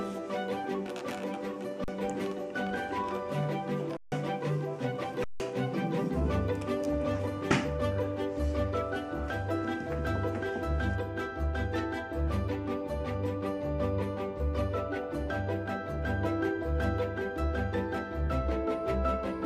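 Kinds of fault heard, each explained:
Underrun with held sample: the output buffer ran dry and the converter kept outputting its last value, so the sound stops dead at 1.84 s for 40 ms, at 3.97 s for 152 ms and at 5.24 s for 160 ms. Roughly as much audio as each gap is lost, about 40 ms, 150 ms and 150 ms. On a waveform each gap is a flat line. A spectrogram shows an empty vertical band.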